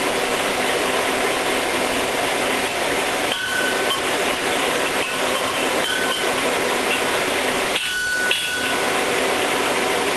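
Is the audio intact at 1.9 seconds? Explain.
No. A stuck bit runs through the whole clip, including 1.9 s. Depending on which bit is stuck, it sounds like grainy noise or harsh, buzzy distortion, with noise filling the quieter moments. The likely cause is one sample bit held at a fixed value, offsetting roughly half the samples by that bit's weight.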